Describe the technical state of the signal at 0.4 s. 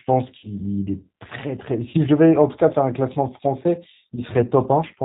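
At 0.4 s you're inside a packet-loss gap, 0.38 to 0.47 s. The decoder covers about 50 ms of missing audio by extrapolating its last pitch and filter, so it comes out as a fading buzzy tone or coloured noise. Underneath, the whole clip carries G.729 coding, which fits an 8 kbit/s stream: clearly rough, synthetic-sounding speech with nothing above 4 kHz.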